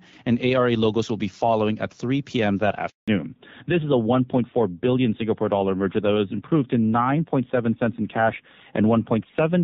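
A speech recording whose first seconds carry HD Voice quality, with the light coding texture of AMR-WB at around 12.65 kbit/s and energy reaching up to about 7 kHz, before two network faults arrive back to back. At 2.90 s a handover gap begins: the call is passed between networks and no speech frames get through for 180 ms, so the sound fades out within a few tens of milliseconds and stays silent until 3.08 s. On a waveform this is a flat, empty stretch cutting into the speech; on a spectrogram it is a clean vertical blank band across all frequencies. From 3.08 s to the end the call shows a fallback to narrowband. Everything above 4 kHz is gone, and the speech turns duller and rougher, which fits a switch to AMR-NB at about 7.4 kbit/s. On a spectrogram the upper region empties abruptly and the content is capped by a hard ceiling at 4 kHz for the rest of the clip.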